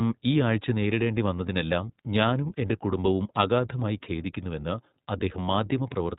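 iLBC codec damage runs throughout: the speech stops at 4 kHz and sounds plainly rough and synthetic, which fits independently coded 20 ms frames at 15.2 kbps.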